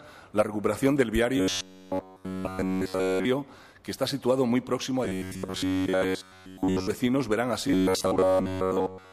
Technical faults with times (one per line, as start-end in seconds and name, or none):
1.37-3.27 robotic sound from repeated short buffers
5.05-6.87 robotic sound from repeated short buffers
7.68-9.12 robotic sound from repeated short buffers